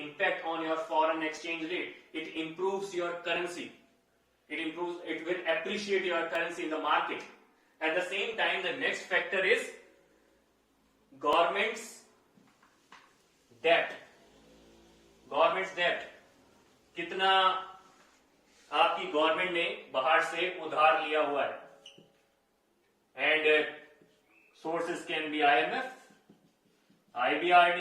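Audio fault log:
1.37, 2.37, 3.36, 6.35, 8.34, 11.33 and 12.32 s: overlap between stream segments. Overlapping 1 s segment boundaries trim 2 to 4 ms of sound, so the waveform jumps in a tiny skip.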